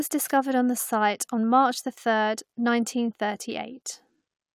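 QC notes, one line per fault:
No faults found on listening.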